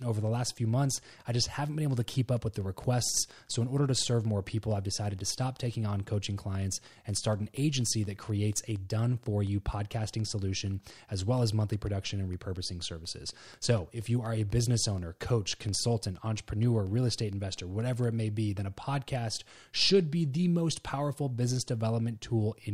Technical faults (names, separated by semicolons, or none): train of clicks